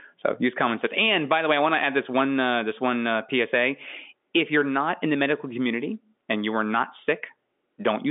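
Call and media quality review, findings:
No faults found in review.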